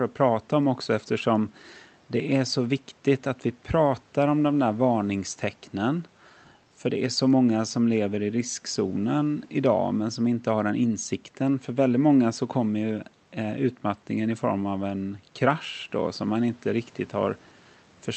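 No technical faults are audible; the room noise sits about 37 dB below the speech, and the call-path audio tops out around 8 kHz, as expected for Opus at 32 kbps.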